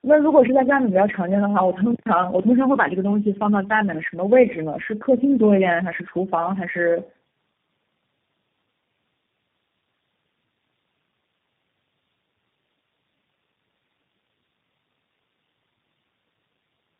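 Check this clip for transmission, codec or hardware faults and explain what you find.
Two faults are present in this speech clip.

Tandem speech coding runs throughout. Repeated decode-and-recode passes through several speech codecs in a row compound their damage, leaving muffled, rough, warbly speech with nothing above 3.6 kHz. That is harsher than any single codec pass would produce.

An intermittent contact occurs from 1.90 to 2.06 s. A momentary open connection cuts the sound for about 113 ms, with crackle at both edges. Unlike a clean packet-loss gap, the crackle at the edges marks a physical break.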